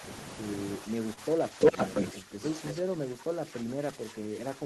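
From 0.78 to 1.76 s the speech gets pushed down, which sounds like speech suppressed in double talk. The level sags by something like 10 dB, and around 0.7 s of that stretch is affected, with the voice dipping and thinning. The likely cause is both sides talking at once: the echo canceller couldn't tell this talker apart from the loudspeaker echo, so it clamped down on everything.

Inside that dip, at 1.13 to 1.19 s, there's a short stall from a late packet. The receiver held the last bit of sound for about 35 ms while it waited, then carried on from the same spot. Nothing is lost, but that moment drags slightly, with a slight buzz or dip. Playback runs 35 ms later from then on.

From 1.60 to 2.08 s an echo leak shows up. A copy of the voice comes back about 352 ms late, and it's loud, roughly 10 dB above the speech itself. That's likely a loudspeaker on one side whose echo canceller let its microphone pickup slip through and sent it back.

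From 2.13 s to the end the suppression returns and goes deeper, down by about 15 dB, so the speech keeps ducking and losing its top end for the rest of the clip.

At 2.67 to 2.73 s there's one more brief echo leak scrap. It's the same 352 ms delay but much quieter, about 10 dB under the speech, so it's just a short ghost of the voice.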